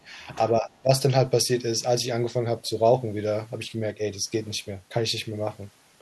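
From 0.61 to 0.89 s the speech gets squashed in a way that sounds like speech suppressed in double talk. The level sags by something like 15 dB at its worst, and the dips add up to roughly 150 ms spread across that stretch, so it comes and goes rather than dropping out cleanly. The likely cause is the echo canceller hearing two talkers at once, failing to tell the local voice from the loudspeaker echo, and ducking everything to be safe.

Right in the middle of that, from 0.74 to 0.81 s, there's a short scrap of the other side's voice leaking through. It's very faint, around 40 dB below the main speech, just a brief trace under the dip. That's likely loudspeaker sound reaching the microphone that the echo canceller didn't fully remove. The far-end talking at that moment would also explain why the suppression kicked in.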